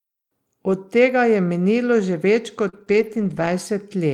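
Lost packet rebuilt from error correction at 0.67 to 0.73 s: about 40 ms of speech played from the low-bitrate backup copy carried in the following packet, which fits two lost packets. There is no gap, but that stretch sounds rougher and noisier.

Short concealed packet loss at 2.69 to 2.75 s: about 40 ms never arrived, and the decoder filled about 33 ms by extending the preceding sound. It is heard as a brief smear.

Lost packet rebuilt from error correction again at 2.73 to 2.83 s, about 60 ms of grainier backup audio.

Short concealed packet loss at 2.85 to 2.88 s: a 20 ms hole, about 12 ms of it concealed, leaving a brief wobble.

Lost packet rebuilt from error correction at 2.88 to 3.47 s: a long run of about 300 ms decoded from backup copies, which fits roughly sixteen lost packets. The speech stays continuous but sounds coarse and noisy throughout.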